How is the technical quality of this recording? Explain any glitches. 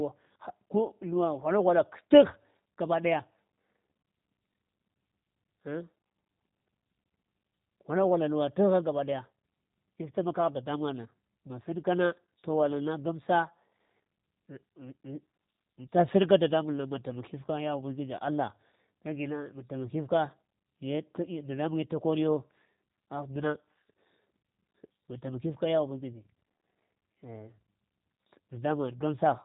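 The recording has been through G.729 coding from start to finish, and the damage is plainly audible. The speech is rebuilt from a vocal tract filter, a pitch predictor and a few pulses per short frame rather than carried as a waveform, which fits an 8 kbit/s codec. Nothing passes above 3.8 kHz, and the speech sounds rough and slightly synthetic. A simple telephone low-pass would keep the dull band edge but not this buzzy, modelled texture.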